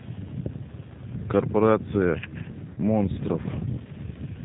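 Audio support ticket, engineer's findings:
G.729 codec on the voice path, whole clip, 8 kbit/s. Speech rebuilt from filter, pitch predictor and sparse pulses per 10 ms frame; nothing passed above 4 kHz. Result: muffled, band-limited speech with plainly audible roughness and a synthetic edge. Consonant detail thinned where high-frequency energy is discarded.

VoIP packet loss concealed by the speech codec, 2.74–2.79 s. Roughly 30 ms of stream missing, consistent with a single dropped packet. Decoder extrapolated from last pitch and filter state at falling gain. Heard as a brief smeared stretch fading out, then weak or distorted speech until decoder state recovers after 2.79 s.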